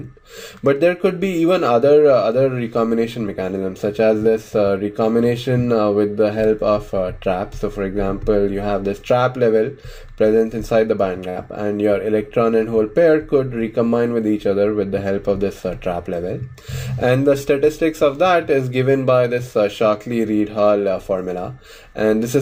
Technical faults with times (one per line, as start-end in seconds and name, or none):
11.29-11.38 burst of packet loss